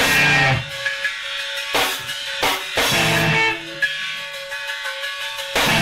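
Mains buzz runs from 0.72 to 2.52 s, sitting low beneath the music, roughly 35 dB down. Sharp switching spikes, the kind a dimmer, rectifier or unshielded run lets into a signal path, arrive twice per cycle of a 60 Hz supply, so the interference repeats 120 times a second. Because each spike is so abrupt, its energy spreads into harmonics stretching up into the kilohertz range, and what results is a steady, raspy buzz rather than a smooth hum.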